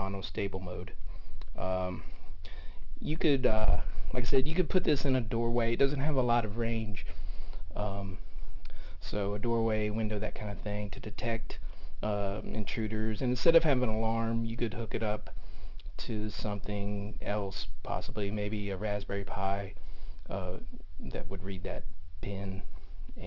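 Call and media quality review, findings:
Aliasing, whole clip: gritty, metallic top end, spectrum running hard up to a 6 kHz edge. Looks like a resample to 12 kHz with no anti-alias filter, so energy above 6 kHz folds back to unrelated frequencies, around 35 dB below the signal.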